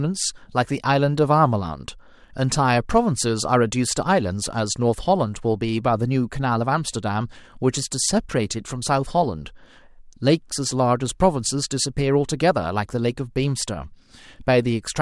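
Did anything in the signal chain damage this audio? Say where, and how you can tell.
No, nothing in the chain audibly damaged this speech, and there is no event at any stage to point to.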